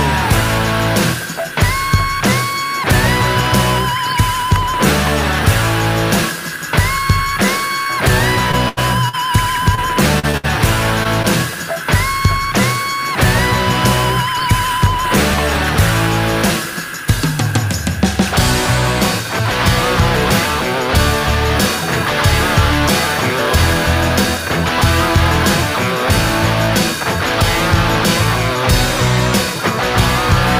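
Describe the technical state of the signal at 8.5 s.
At 8.51 to 8.55 s there is a short concealed packet loss: about 20 ms of audio never arrived in time, and the decoder patched it by extending the preceding sound before blending back. It comes through as a brief smear or wobble rather than the clean silent gap of a plain dropout.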